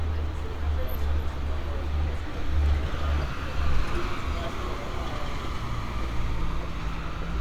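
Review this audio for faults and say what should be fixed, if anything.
No faults found in the recording, so nothing needs fixing.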